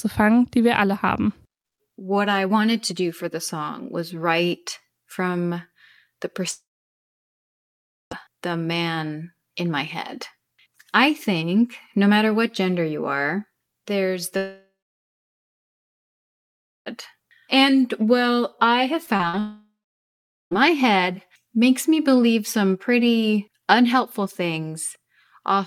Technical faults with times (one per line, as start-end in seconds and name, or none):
6.51-8.13 long network dropout
14.37-16.88 long network dropout
19.06-19.35 short concealed packet loss
19.39-20.53 long network dropout